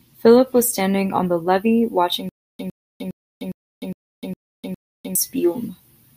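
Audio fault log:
2.29 to 5.15 s, stutter with silent gaps: the same roughly 107 ms scrap of speech comes back seven times, each followed by about 302 ms of dead silence, so it ticks over every 409 ms. Likely a stalled stream replaying its last fragment, and whatever should've played there is lost.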